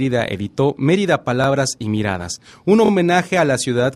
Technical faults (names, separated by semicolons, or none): repeated buffer